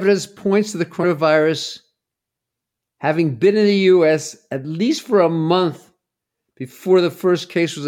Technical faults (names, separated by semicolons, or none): compressed frames skipped